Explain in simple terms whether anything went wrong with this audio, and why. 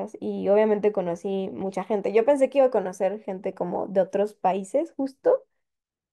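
CD scratch ticks appear from 0.99 to 2.03 s: six tiny clicks, the longest lasting only about a millisecond. A scratch on the disc wiped out more data than the player could repair, once per turn, so it briefly patched or silenced the speech there.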